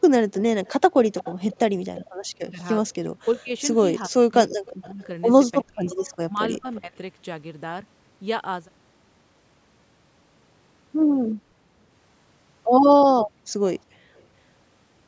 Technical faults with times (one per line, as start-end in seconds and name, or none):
0.33-2.09 echo leak
2.33-2.61 speech suppressed in double talk
3.24-3.51 speech suppressed in double talk
4.09-5.09 speech suppressed in double talk
4.50-5.07 echo leak
5.62-6.78 echo leak
5.63-6.92 speech suppressed in double talk
13.74-14.23 echo leak